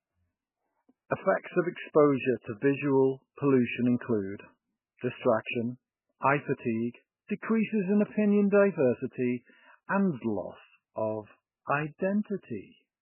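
Speech runs through the whole clip with no content above 3 kHz and a watery, swirling texture, the likely result of MP3 compression at a very low bitrate, roughly 8 kbps. Starved of bits, the encoder cuts the treble and drops weaker frequency lines, which flicker in and out from frame to frame. That flickering sets it apart from a simple low-pass filter, which would sound dull but steady rather than unstable.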